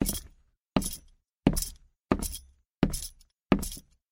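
No technical faults are audible.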